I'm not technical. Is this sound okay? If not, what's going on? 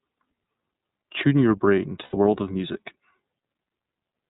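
No. The whole clip went through the iLBC codec, a phone-style compressor that drops everything above 4 kHz, so the speech sounds muffled, slightly rough and synthetic. Between "your brain" and "world of music", at 2.03 to 2.16 s, about 90 ms of lost iLBC frames were filled by repeating the last sound, giving a brief, slightly buzzy or breathy held vowel.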